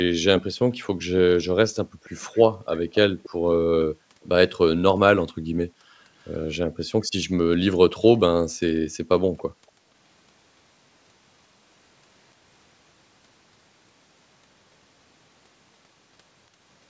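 Background gated by the echo canceller at 1.84–2.03 s: while the loudspeaker played, the canceller cut the microphone by about 40 dB, so the room sound drops out briefly and returns. The same gating recurs at 3.96–4.22 s, 5.33–6.78 s and 8.74–9.9 s, the last dipping about 34 dB.

Echo leak at 2.04–3.3 s, 4.22–4.26 s, 6.23–6.36 s and 9.37–9.71 s: a faint copy of the voice trails 284 ms behind, well below the speech. It is likely loudspeaker sound the canceller failed to remove and sent back.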